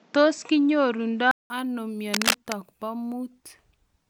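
From the start of the speech to 1.5 s, the audio is dull and boxy, with nothing above 8 kHz. It then opens up after a gap of about 0.19 s. This is most likely an input switched to a poorer device, such as a headset's call profile. A plain low-pass filter would not explain what else changes at the switch: the level shifts by roughly 5 dB, and a different background hiss sits about 35 dB below the speech.

From 2.13 to 2.52 s, dense, uneven scratching and rustling lies over the speech at about the same loudness as the speech itself. This is cable scratch noise, likely from a worn cable or connector being moved so that its contact resistance fluctuates rapidly. Clipping crackle would follow the loud peaks of the signal. These bursts are irregular, independent of what is being said, and stop once the movement ends.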